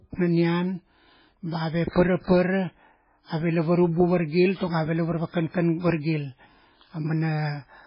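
Throughout the speech, the likely cause is heavy MP3 compression at a bitrate starved enough to fit about 16 kbps: the encoder discards everything above 5.2 kHz and drops weak frequency lines frame by frame, leaving a dull, watery, swirling sound with smeared consonants.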